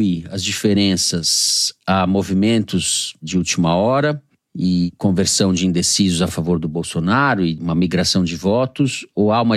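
At 1.55 s, just before "a movimentos de última", repeated frames make the speech stutter. A 46 ms block, which fits two 23 ms compressed frames, plays twice more and adds 93 ms. At 6.27 s, between "conversão de indecisos a" and "favor do", one 23 ms block repeats. On a spectrogram the same slice appears side by side.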